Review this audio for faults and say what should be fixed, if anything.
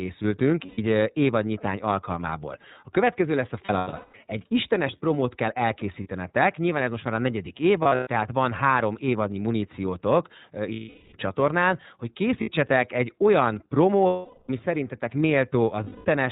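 iLBC codec, throughout the speech: the band stops at 4 kHz, so sibilants and breath lose their edge, and each frame's excitation is coded on its own, giving a rough, faintly synthetic grain. The 30 ms framing and the data rate point to iLBC's 13.33 kbps mode, and the damage is plainly audible. To prevent it, carry the call on a wideband codec such as Opus.

Lost iLBC frames occur at 0.66–0.78 s, just before "eh évadnyitány alkalmából"; 3.66–4.15 s, as broken losses over about half a second with the longest stretch around 0.2 s; 6.03–6.07 s; 7.82–8.07 s, between "most már a negyedik" and "tehát van három évadnyi"; 10.74–11.14 s; 12.41–12.50 s; 14.06–14.50 s, after "egy olyan"; and 15.84–16.06 s. In each gap the decoder repeats the last pitch cycle mixed with noise, so the gap sounds like a held, buzzy vowel. In the longer gaps, up to about 0.4 s, that sound fades. Because each frame decodes independently, the voice recovers almost immediately. 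To prevent these gaps, fix the packet loss on the network path and add forward error correction or redundancy.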